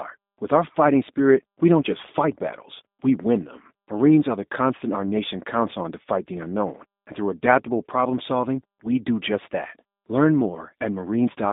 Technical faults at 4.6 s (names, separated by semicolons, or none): G.729 codec